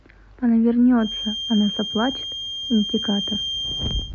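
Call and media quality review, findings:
Thin steady whistle at 3.2 kHz under the speech, about 10 dB down, swelling and fading slowly, 0.96 s to end. Feedback whistle: likely speaker-to-mic acoustic loop held at the edge of oscillation.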